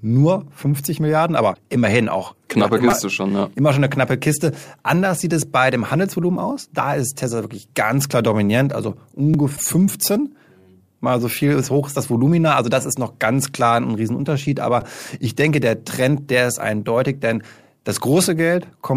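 At 1.50 to 1.57 s the speech breaks into a brief glitch lasting about 70 ms. This is damaged data in a compressed stream: some bytes in that stretch were wrong, so the decoder misread the frames, lost sync and hunted for the next valid frame header before playback could resume. A second glitch of the same kind, also about 70 ms long, follows at 9.53 to 9.60 s.

Between those two events, at 2.90 to 2.92 s, there is a tiny buzzy click. It is a repeated buffer: fresh audio didn't reach the device in time, so it replayed its last block, which is about 5 ms long and fits a very small output buffer. That block sounds four extra times, and the hard join at each repeat fuses into a buzz rather than an audible stutter. The same fault returns as a shorter click at 9.34 s with two extra plays and at 14.81 s with three. Each time the speech picks up where it left off, with essentially nothing skipped.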